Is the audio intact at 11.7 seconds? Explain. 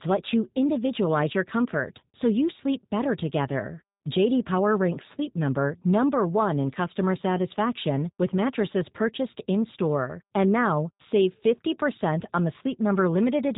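No. At 11.7 seconds the speech carries G.729 codec damage, as it does through the whole clip. The codec does not store the waveform. It rebuilds speech from a vocal tract filter, a pitch predictor and a few pulses per short frame. The roughness fits a low-rate stream near 8 kbit/s. Nothing above 3.8 kHz survives, so the speech sounds dull and band-limited. The damage is plainly audible as a rough, synthetic texture.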